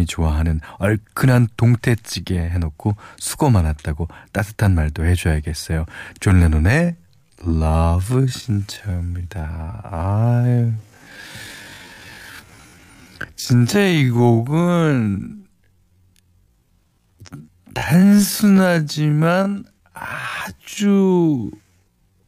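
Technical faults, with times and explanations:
6.76 to 22.22 s, time-stretched section: the speech abruptly slows to 0.53 times its pace with its pitch unchanged. Software likely repeated short pieces, which makes it drag.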